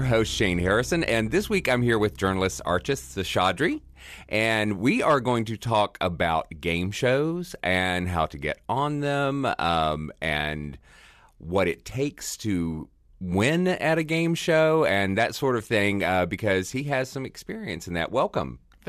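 No technical faults can be heard anywhere in the speech recording.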